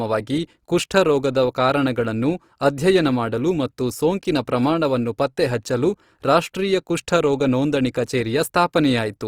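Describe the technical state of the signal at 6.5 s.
Opus compression runs through the whole clip, 6.5 s included: at this low rate bands get noise-filled, so the speech sounds grainy and rough, likely from a CELT-mode encode.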